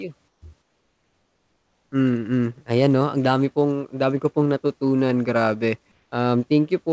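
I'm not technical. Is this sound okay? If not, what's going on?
No. In the pauses at 0.28 to 0.42 s, 0.62 to 1.92 s and 5.92 to 6.12 s, the real background becomes a flat, slightly quieter hiss. This is comfort noise in place of the background, likely from a call system filling silences with made-up noise.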